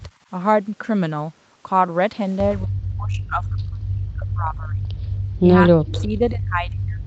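From 2.59 to 4.93 s the speech dips sharply and breaks into pieces, with about two seconds of that span pushed down by as much as about 40 dB. This is speech suppressed in double talk. It likely happened because the other side was talking at the same time, and the echo canceller couldn't tell this talker apart from loudspeaker echo, so it turned everything down. The same thing returns at 5.41 s and lasts to the end of the clip, with drops again reaching about 40 dB.

During that second stretch, from 5.89 to 6.03 s, a brief faint copy of the speech trails the original by 88 ms, sitting about 15 dB below it. This is an echo leak. The likely cause is a far end playing the call on a loudspeaker, where residual echo slipped past its canceller and was sent back. All of this is heard within the call path's 8 kHz bandwidth.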